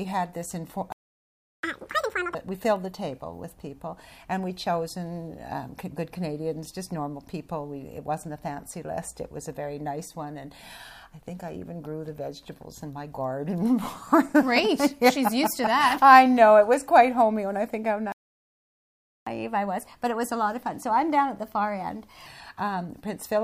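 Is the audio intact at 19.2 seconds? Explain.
No. At 19.2 seconds the output is in a playback stall, silent from 18.12 to 19.27 s, about 1.14 s. The sound cuts off mid-flow. The likely cause is the player running short of data or its thread being blocked.

From 19.27 to 22.27 s comes catch-up at higher speed. The player resamples its backlog at 1.1 times normal speed to regain the lost time. Pitch rises by about one and a half semitones, then settles back.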